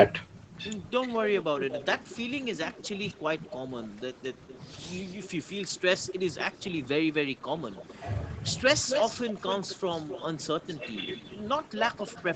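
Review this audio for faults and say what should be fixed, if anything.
There's an echo leak in three stretches: 1.38 to 4.59 s, 6.07 to 6.89 s, and from 7.42 s to the end. A fainter copy of the speech trails the original by about a quarter second (238, 248 and 259 ms), roughly 10 dB down. The likely cause is a loudspeaker on the far end whose echo canceller isn't fully subtracting what its mic picks up, so the residue gets sent back. Using a headset or retuning that canceller's echo path estimation should stop it.

Speech suppressed in double talk shows up briefly at 7.36 to 7.41 s. For about 50 ms the level dips by around 5 dB, just before the echo returns. It's likely the canceller couldn't separate the local talker from the incoming echo and turned everything down together. A canceller with better double-talk detection, or less aggressive residual suppression, would avoid ducking the talker like that.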